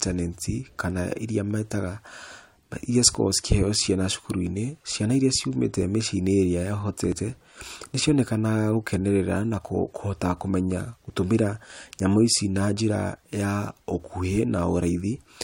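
Speech clip with two brief skips, at 3.15 s and 7.12 s, caused by overlap between stream segments. The audio is delivered in 4-second segments whose time stamps overlap slightly at the joins, and the player trims the overlapping span even though that material was not actually duplicated. About 5 to 6 ms of real signal is discarded at each boundary, so the waveform jumps discontinuously and produces a tiny skip, the two about 4 s apart.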